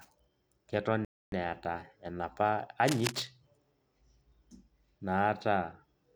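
Speech, interrupted twice by distinct faults. The first is most likely a Bluetooth stall: interference delayed the wireless packets long enough for the headphones' small playback buffer to empty, and nothing could be played until the retransmitted data caught up. From 1.05 to 1.32 s the speech drops to complete silence for about 274 ms, then resumes as the buffer refills, leaving an abrupt hole rather than a fade. The second is cable scratch noise, likely from a worn cable, plug or control being moved so that its contact resistance jumped around erratically and modulated the signal. Between 2.87 and 3.25 s a dense, irregular burst of scratchy, rustling noise sits over the speech, only a little quieter than the speech itself, so it is clearly audible for that moment.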